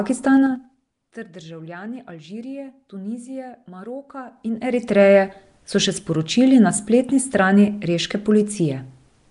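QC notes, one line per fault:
Throughout: Nellymoser compression. The speech has a rough, hissy halo and a smeared, underwater quality, and the damage is plainly audible. Nothing is present above 10.6 kHz. The likely cause is the Nellymoser Asao codec, at a rate that fits about 44 kbps. It codes short blocks with very few bits, so weak bands get no bits and are filled with noise. That noise fill makes the hiss, and the block coding causes the smearing.
0.37–0.84 s and 4.18–5.02 s: zipper noise. In the first run the level drops by about 20 dB in 4 dB steps. In the second it rises by about 20 dB in 2 dB steps. Both runs move at roughly ten steps a second. Each step is applied at once, with no smoothing. Every jump puts a small click into the waveform, so a ticking rides on the speech while the level moves.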